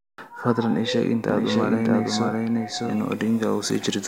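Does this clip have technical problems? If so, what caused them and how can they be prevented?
Yes. A doubled audio track runs from 1.29 to 3.23 s, starting just after "fadlan ii sheeg inta": a second, full-band copy of the speech trails the original by roughly 0.7 s at about the same loudness, with no decay or room colour, and it cuts in and out abruptly. The likely cause is the same signal reaching the mix twice, once through a slower path or an edit that leaves two offset copies. To prevent it, route each source through a single path and check edits for duplicated regions.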